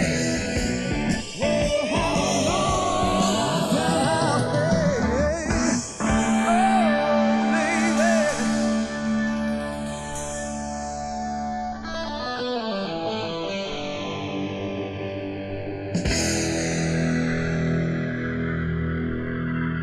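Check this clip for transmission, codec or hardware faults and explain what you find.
The channels are drifting apart throughout. Two separately clocked devices, mismatched by roughly 50 ppm, let the inter-channel delay creep to under a millisecond, sweeping comb notches like slow flanging.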